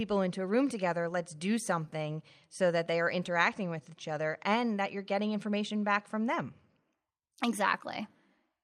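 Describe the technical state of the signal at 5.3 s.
At 5.3 s the speech signal is intact, with no audible fault at that point.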